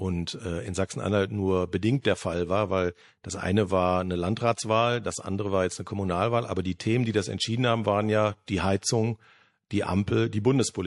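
From start to finish the speech carries plainly audible compression damage, most likely from MP3 compression at a low bitrate, around 48 kbps. The encoder has too few bits. It cuts the treble and drops weak frequency lines. Those lines flicker on and off between frames. The result sounds watery and swirly. S sounds turn metallic and chirpy. Consonant attacks lose their edge and smear.

At 2.02 to 2.05 s there is pre-echo. A burst of hiss rises about 13 dB in the 28 ms before a sharp onset. The codec spread its quantisation noise across a whole block, which fits a block of roughly 48 ms. The attack sat late in that block. No shorter block was used to contain it. So the noise leaked into the quiet gap ahead, and the attack sounds softened.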